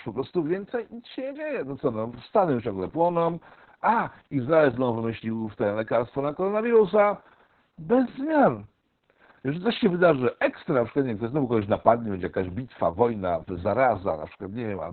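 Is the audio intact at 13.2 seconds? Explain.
No. At 13.2 s, as throughout the clip, Opus voice compression applies: the SILK coder works narrowband and quantises the excitation coarsely, which fits a bitrate near 6 kbps. Speech sounds muffled, hoarse and slightly robotic. A spectrogram shows nothing above 4.4 kHz.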